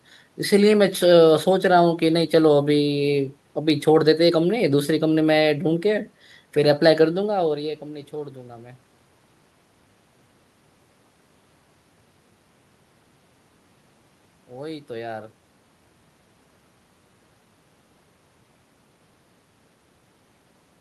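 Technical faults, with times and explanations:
No technical faults are heard in this speech recording.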